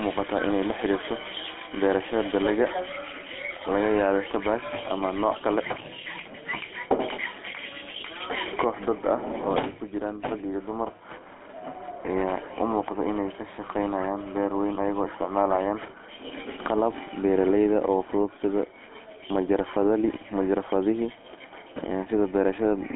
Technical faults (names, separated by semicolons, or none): GSM full-rate codec